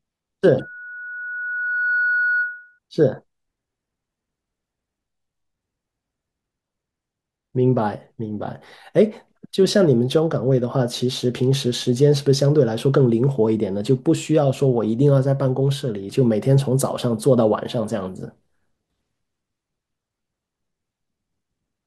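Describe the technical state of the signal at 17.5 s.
At 17.5 s the speech signal is intact, with no audible technical fault at that moment.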